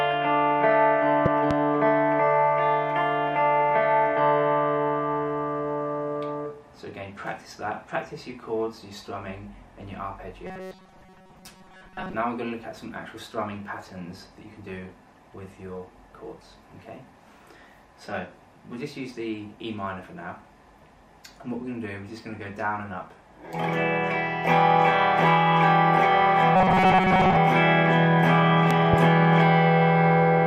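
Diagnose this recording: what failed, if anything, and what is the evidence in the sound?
Loud pop: two pops between 1.26 and 1.53 s and two more between 28.71 and 28.96 s, each about 15 dB above the audio, which continues underneath. The likely cause is a voltage step in the analogue wiring or driver, from a plug, switch, static or glitch.

Robotic sound from repeated short buffers, at 10.46 to 12.14 s and 26.56 to 27.37 s: a rigid, metallic buzz at 188 Hz covers most of the audio. At the driver or buffer stage, new audio likely arrived too seldom, so a segment of about 5.3 ms was replayed repeatedly.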